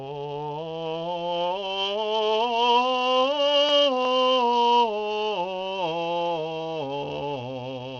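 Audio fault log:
Throughout, Bluetooth SBC compression: the music's treble flickers and drops away under a gritty, aliased haze, likely from SBC coding, which fits a starved bit pool near 80 kbps, leaving the weak upper sub-bands with few or no bits and the rest coarsely quantised.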